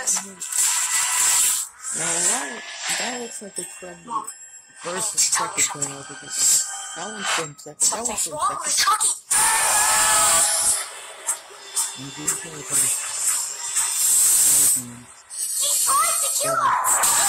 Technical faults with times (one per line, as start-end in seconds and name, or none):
12.21-12.26 Bluetooth stutter